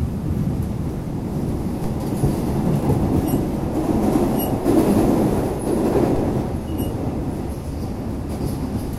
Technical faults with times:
1.84 DC step
6.16 DC step

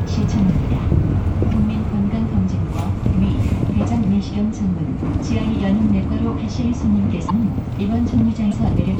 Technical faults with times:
1.50-1.53 broken MP3 bit reservoir
5.19-5.22 broken MP3 bit reservoir
7.28-7.31 broken MP3 bit reservoir
8.50-8.53 broken MP3 bit reservoir

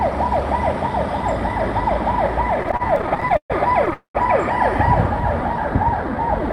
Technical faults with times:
2.63-3.94 repeated stalls (stutter)
3.94-4.16 call audio freeze
5.21-6.48 jitter buffer slow-down

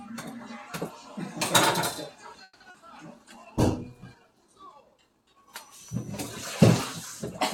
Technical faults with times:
2.43-2.62 call audio freeze
2.70-2.76 short concealed packet loss
3.14-4.70 call bitrate drop

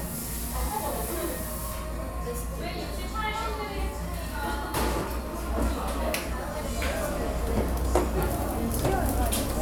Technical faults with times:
none

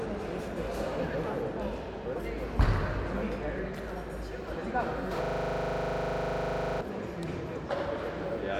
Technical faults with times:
5.25-6.81 system hang loop

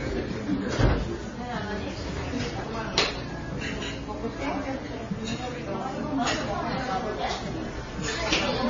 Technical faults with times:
0.00-8.70 transcoding between lossy codecs

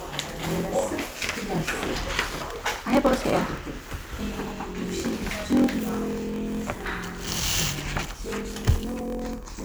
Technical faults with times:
0.00-9.65 block size mismatch (padded)

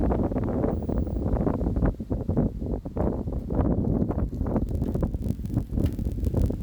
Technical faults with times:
4.67-6.62 block size mismatch (padded)

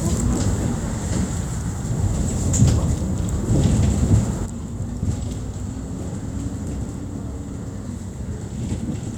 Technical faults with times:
4.46-9.17 sudden gain jump

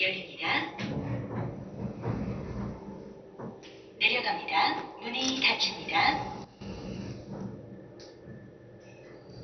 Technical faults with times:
0.00-9.43 MP2 compression
6.44-6.61 sudden gain jump

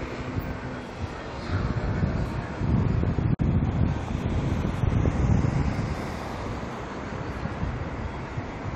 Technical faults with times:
3.35-3.39 gap at a join of encoded pieces

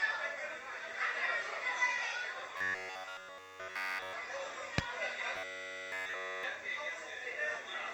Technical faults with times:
2.57-4.13 robotic sound from repeated short buffers
5.36-6.43 robotic sound from repeated short buffers

